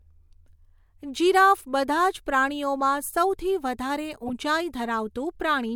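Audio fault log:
4.27–4.30 s, corrupt frame decoded: a short blip cuts into the speech for about 34 ms, peaking at roughly -20 dBFS. Flipped bits in the compressed data led the decoder to read wrong gains or codes, so it placed energy at frequencies that do not belong to the signal. The burst lasts about the span of two damaged frames, which is why it sounds like a brief chirp rather than a sustained fault.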